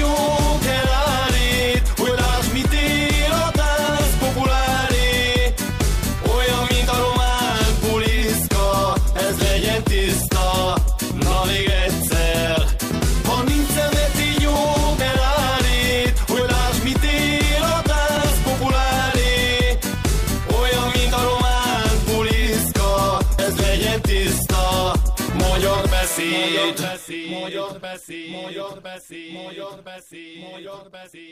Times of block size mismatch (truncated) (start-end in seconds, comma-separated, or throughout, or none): none